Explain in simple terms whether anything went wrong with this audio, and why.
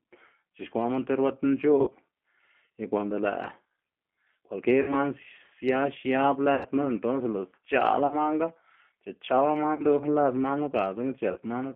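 Two things went wrong. The whole recording has passed through the G.729 codec, a low-rate internet-telephone codec that rebuilds speech from a simplified model of the voice. It keeps only a narrow phone-like band, roughly 200 Hz to 3.4 kHz, so the speech sounds thin and boxed-in. Because the codec rebuilds each sound from a model rather than sending the original, there is a plainly audible roughness and a slightly synthetic edge throughout.

The second problem is VoIP packet loss concealed by the speech codec. At 1.81, 4.82, 6.55, 8.07, 9.75 and 11.32 seconds, chunks of audio between 40 and 100 milliseconds long never arrived. The decoder filled each gap by stretching the last sound it had, so you hear a brief smeared, tone-like or hissy patch that fades. Because each chunk is decoded from the one before it, the speech stays weak or distorted for a moment after normal audio returns. The longest dropout is at 6.55 seconds.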